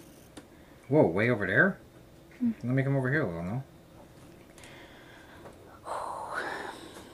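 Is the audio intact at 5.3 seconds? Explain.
Yes, the audio at 5.3 seconds is intact, with no dropout, click, distortion or other fault at that moment.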